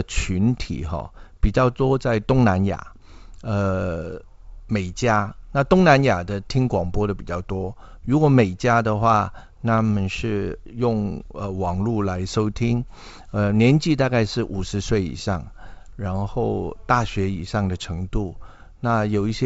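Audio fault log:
No faults are present in this clip. The speech comes through G.722 wideband telephone coding at 64 kbit/s, reaching up to about 7 kHz with at most a faint hiss in the upper band.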